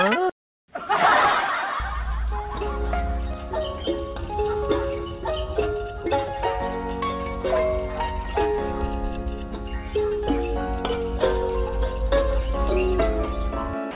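At 13.91 s, in the final 50 ms, the sound gives way to steady noise or near silence instead of continuing. This is most likely sound dropped by the voice detector: treating the tail as background, the sender stopped transmitting and the receiver filled the gap with comfort noise. Unlike a packet-loss gap or a hard cut to digital silence, the replacement is steady noise or near silence, heard within the call path's band with nothing above 4 kHz.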